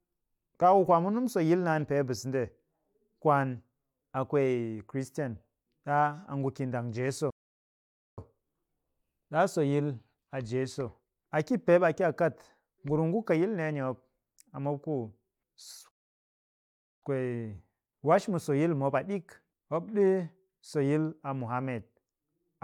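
Speech that twice halts into full silence, from 7.30 to 8.18 s (about 0.87 s) and from 15.91 to 17.02 s (about 1.11 s). These are playback stalls, likely from the player running short of data. Unlike brief dropouts of a few milliseconds, each gap lasts close to a second.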